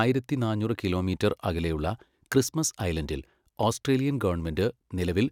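Nothing in this speech recording stands out as a technical fault; it simply carries on the whole way without anything going wrong that a listener would notice.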